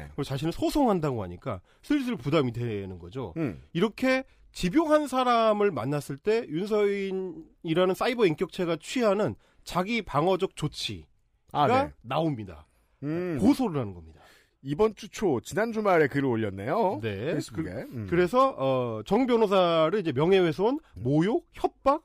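Listening to the speech in the clip, nothing technical stood out as a fault.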